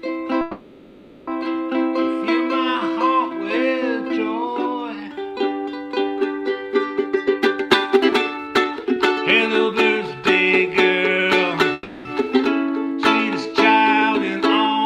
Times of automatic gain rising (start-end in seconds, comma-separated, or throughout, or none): none